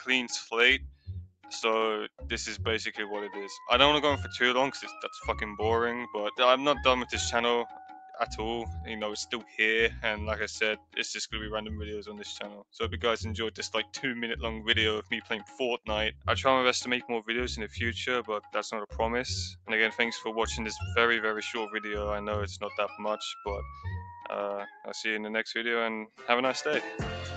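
At 0.91 to 1.08 s, 1.25 to 1.45 s and 10.77 to 10.96 s, sound is cut by the noise suppressor, which mistakes it for noise and ducks it by about 16, 19 and 12 dB. The waveform visibly shrinks there, and the spectrogram fades.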